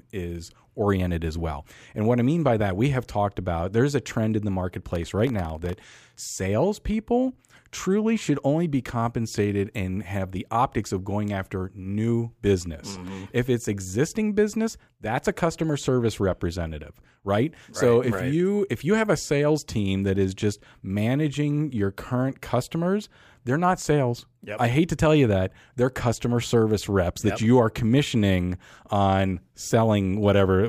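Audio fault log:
4.89–6.16 s, processor overload crackle, after "a trend in the" and before "salespeople truly should only". Dozens of tiny buffers, each under a millisecond, miss their deadline. Each miss drops a sliver of silence with hard edges. Packed together, they tear gritty crackle across the speech.
12.84–13.08 s, processor overload crackle, after "of going after new". A short burst of a few missed buffers, each about 0.7 ms. The silent gaps cut in and out sharply. The result is a brief rough crackle that stops once the load eases.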